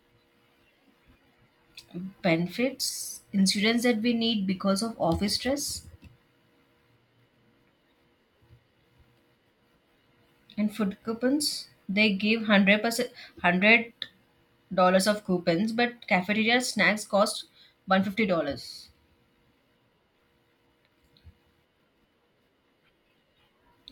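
No technical faults turn up at any point in the recording, so there is nothing to place in time order.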